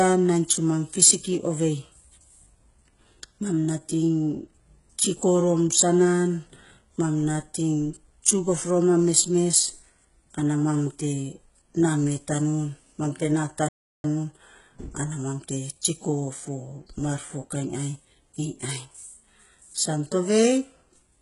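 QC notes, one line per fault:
Throughout, HE-AAC compression: likely a heavily compressed HE-AAC encode, fitting roughly 12 kbps, with treble rebuilt by band replication, so s sounds turn gritty, metallic or lispy.
13.68–14.04 s, playback stall: the player likely ran short of data or was blocked, so the output goes silent for about 0.35 s after "tanun mam te na" before sound resumes.
17.06 s, DC step: the waveform's zero line jumps to a new offset that then decays through a 20 Hz high-pass, making a low thump between "ma ta tsiko fo" and "mar fokainy".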